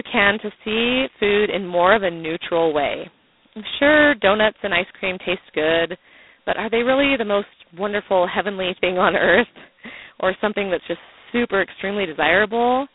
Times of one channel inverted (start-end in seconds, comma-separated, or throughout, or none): none